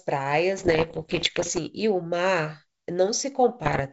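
From 0.58 to 1.59 s and again from 3.64 to 3.81 s, bit errors on an ADPCM link cause pops and rough bursts, each corrupting the decoder's step size.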